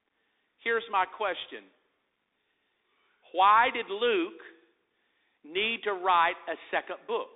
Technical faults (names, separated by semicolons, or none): Bluetooth CVSD headset codec